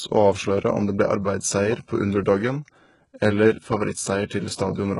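HE-AAC compression runs through the whole of this speech clip, with nothing above 11.1 kHz and heavy damage that points to a very low bitrate near 12 kbps. The treble is likely rebuilt by copying lower bands upward, so s sounds come out gritty and metallic rather than crisp. Pre-echo appears from 4.26 to 4.30 s: a hiss about 38 ms long precedes a sharp attack, because the codec spread the noise meant for the loud onset across the quiet stretch before it, leaving the attack smeared.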